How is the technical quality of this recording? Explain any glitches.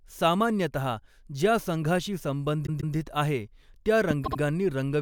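The speech has three audible glitches, all in its second half: two stutters and one sharp pop.

From 2.65 to 2.94 s the speech stutters as a 144 ms fragment plays two extra times, adding 288 ms. These are repeated frames: the same compressed blocks were delivered and decoded again.

At 4.11 s a single loud pop jumps out, about 10 dB above the speech, which carries on underneath. It is likely a sudden voltage spike from a plug, switch or static discharge.

From 4.24 to 4.38 s the repeated frames return more briefly. A 72 ms fragment plays two extra times, adding 144 ms of stutter.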